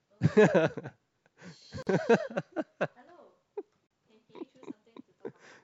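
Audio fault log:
1.83–1.87 s and 3.87–3.91 s, gap at a join of encoded pieces: the speech drops out abruptly into short silences of about 44 ms and 38 ms, their edges softened by codec smearing, and then resumes from exactly where it stopped. The two gaps fall 2.0 s apart, which points to the audio having been encoded in 2-second pieces and joined untrimmed, so each encoder's leading delay and padded final frame remain at every join.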